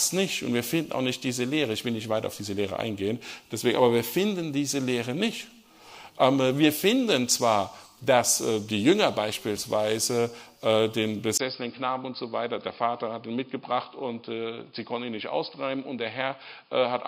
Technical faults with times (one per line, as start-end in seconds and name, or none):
11.37-17.07 input switched to a poorer device